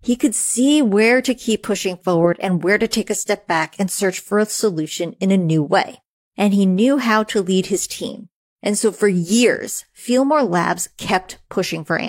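No technical faults are audible anywhere in the speech recording.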